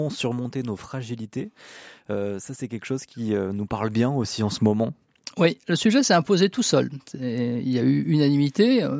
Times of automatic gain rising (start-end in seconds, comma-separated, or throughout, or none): 3.15-4.45